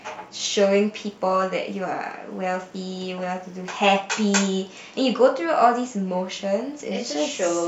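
From start to finish, the speech carries computer activity noise. A faint buzzing chirp sits under it, pulsing around 70 times a second. It is roughly 40 dB below the speech, so it is quiet. The pulses do not follow the talker's level or pauses. Changing load on the computer's processor or graphics is shifting the shared ground of the audio circuit. That ground movement leaks into the signal as this rhythmic interference.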